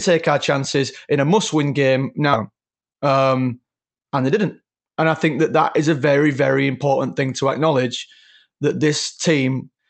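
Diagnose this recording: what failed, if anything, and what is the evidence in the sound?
At 2.33 s the speech jumps forward with no gap. About half a second is simply gone, and the two sides are butted together. This is a skip ahead in the network jitter buffer: audio was dropped and playback resumed on later, already-queued packets.

From 2.49 to 3.65 s the speech runs 10% fast at unchanged pitch, sounding hurried, and again from 4.34 to 5.02 s at 6% fast. This is jitter buffer speed-up. The receiver repeatedly trimmed pitch-period slices, roughly 150 ms and then 50 ms, to shrink excess buffered delay.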